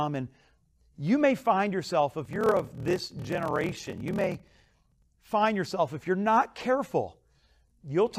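From 2.23 to 5.06 s the speech has a block size mismatch (padded). Each block written is shorter than the next stage reads, which fits 1024-sample blocks, so zeros fill the rest. A buzz at 38.3 Hz appears, and the speech slows to 0.889 times normal speed at about the same pitch.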